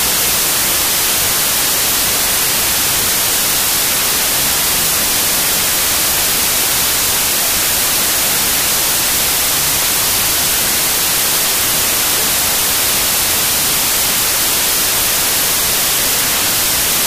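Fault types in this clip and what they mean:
Wrong sample width: The audio was stored as 32-bit integers but is read as 16-bit integers. Each original sample splits into two values. One half carries the top bits of the real signal. The other half is low-order bits that play as loud, harsh noise. The speech sits buried under that noise throughout. Doubling the count of values also slows playback to half speed, so the speech drags and drops a full octave in pitch.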